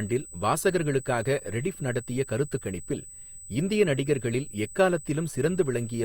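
A USB bus leaking its 125-microsecond microframe current into the power or ground puts a steady 8 kHz whine, roughly 20 dB below the speech, under the whole recording.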